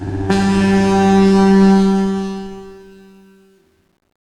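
Truncation distortion on the fade runs from 1.71 s to 4.27 s: the fade-out keeps only about 10 bits without dither, turning gritty from 2.72 s.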